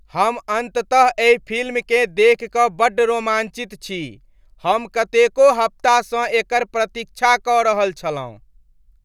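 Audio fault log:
No technical faults can be heard anywhere in the speech signal.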